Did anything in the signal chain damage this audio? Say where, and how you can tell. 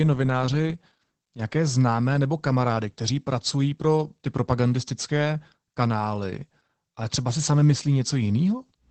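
Yes. Throughout, the speech sounds muffled, hoarse and faintly robotic, with nothing above 8.4 kHz. That points to the codec stage: Opus voice compression in its SILK linear-prediction mode, coding the excitation coarsely at a low bitrate, which fits about 12 kbps.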